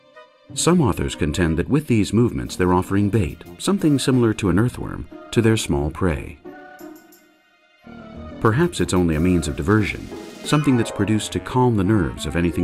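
No technical faults are audible anywhere in this audio.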